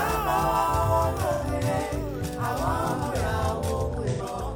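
At 1.33 to 1.44 s and again at 4.10 to 4.21 s there is AAC frame loss with concealment: each gap of about 85 ms, which fits two lost frames, was patched by the decoder reusing the last good spectrum. The result is a brief smeared, phasey wash rather than a hard dropout. The sound never goes fully silent. It turns diffuse for that instant, which separates this from a plain gap or mute.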